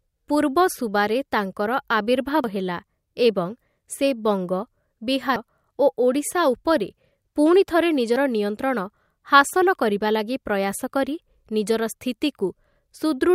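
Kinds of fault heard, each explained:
Dropped buffer (overrun): at 2.44 s, just before "ହେଲା ଏବଂ", then at 5.36 s and 8.16 s, the speech jumps ahead, losing up to about a tenth of a second. Unlike a dropout, no silence is left. The likely cause is samples overwritten before being read.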